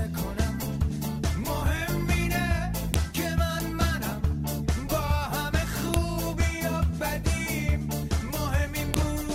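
At 2.94, 5.94 and 8.94 s a sharp, loud click snaps through regardless of what the sound is doing, repeating every 3.0 s. This is a file header played as audio: separate pieces were joined without stripping their WAV headers, so those bytes are read as samples. On the waveform each appears as a brief spike; on a spectrogram, a thin vertical line spanning all frequencies.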